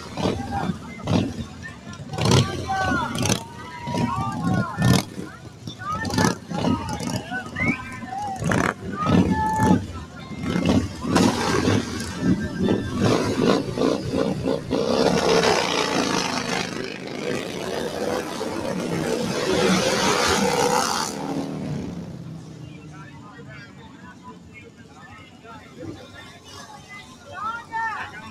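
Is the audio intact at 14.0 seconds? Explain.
No. At 14.0 seconds, as throughout, sustained parts and tails sink by roughly 10 dB while attacks pass, because a noise suppressor is applied to music or sounds.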